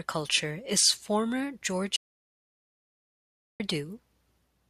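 At 1.96 s, just after "is former", the input was likely lost, a disconnected device, failed link or mute, while recording carried on writing silence. This audio dropout to silence cuts the speech off mid-flow into dead silence, with no room tone, until it resumes at 3.60 s, about 1.6 s of speech missing.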